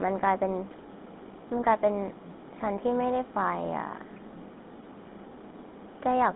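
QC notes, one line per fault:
Throughout, GSM full-rate codec: buzzy, gravelly speech cut off above 3.8 kHz; the crude pulse-excited vocal-tract model roughens everything, which fits a 13 kbps stream.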